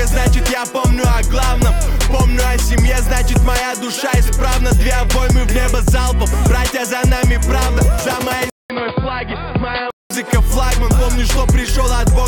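Input switched to a poorer device from 8.50 to 10.10 s, likely: after a 200 ms gap, the audio turns dull and boxy with nothing above 4.8 kHz, drops about 5 dB in level, and carries a faint new background noise, all typical of a narrower-band microphone.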